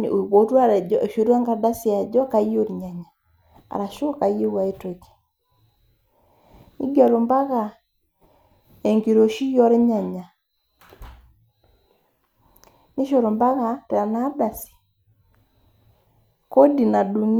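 The speech contains no audible technical faults.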